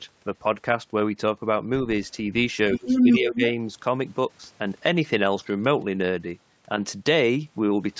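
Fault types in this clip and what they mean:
Other side's voice leaking through: a second voice appears under the speech from 2.73 to 3.18 s, around 5 dB louder than the talker, and again briefly from 3.41 to 3.45 s, around 5 dB below the talker. This is likely loudspeaker playback that the echo canceller did not remove from the microphone. Unlike double-talk suppression, this fault adds a voice that does not belong to the talker rather than taking away the talker's own level.
Speech suppressed in double talk: while the other side is audible, the talker's voice drops by around 20 dB from 2.75 to 2.88 s and by around 10 dB from 3.05 to 3.42 s. The likely cause is an echo canceller that could not separate the near talker from the loudspeaker echo and pulled the microphone signal down. What sets this apart from leakage is that the talker's own voice loses level, and no extra voice is added.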